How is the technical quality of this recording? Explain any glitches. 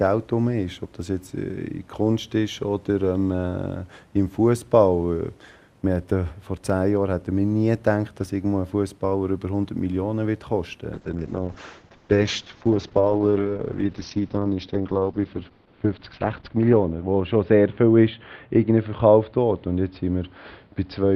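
Quality drops sharply partway through. From 10.95 s to the end, the sound turns rough, watery and muffled, losing its top end. This is a call bitrate drop: the encoder fell from 64 kbps to 7 kbps and narrowed the bandwidth from 20 kHz to 6 kHz, coding far more coarsely for the final stretch.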